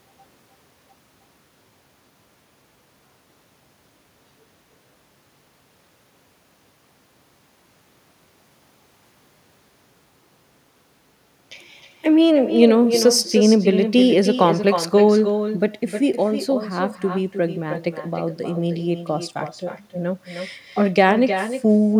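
Echo with no canceller runs throughout the clip. The far end plays the call through a loudspeaker, its microphone picks it up, and nothing strips it out. So the speech returns roughly a third of a second later, about 9 dB quieter and thinner.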